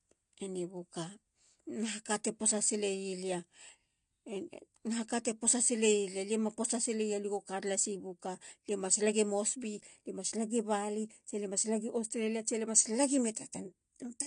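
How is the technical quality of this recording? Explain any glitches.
The recording has plainly audible codec damage for its full length. The cause is likely AAC compression: AAC-LC at a low rate, consistent with about 32 kbps, discards everything above 9.8 kHz and coarsely quantises what remains. The result is dull, smeared speech with a warbling, fizzy edge on sibilants.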